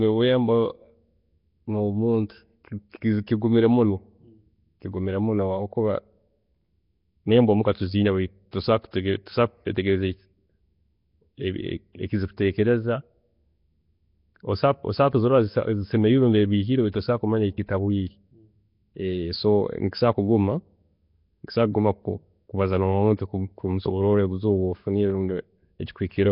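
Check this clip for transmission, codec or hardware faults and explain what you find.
The clip has two faults: heavy low-rate codec damage throughout and several short pre-echoes.

Nellymoser compression, throughout: a block codec likely at around 22 kbps starves weak bands and fills them with noise, leaving hissy, underwater-sounding speech with nothing above 5.3 kHz.

Pre-echo, at 8.51 s, 8.91 to 8.93 s, 16.92 s and 23.17 to 23.19 s: quantisation noise spreads across each coding block, so a short hiss of about 17 to 22 ms leads sharp attacks, softening them.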